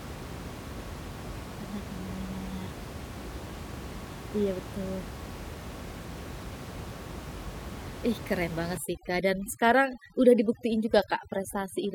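Speech, with room noise sitting about 12 dB below the voice, and overdone noise removal from 8.77 s to 11.94 s, just after "keren banget". Heavy spectral gating pulls individual frequency bands down wherever they approach the noise estimate, leaving a lowered background that breaks up into twinkling specks.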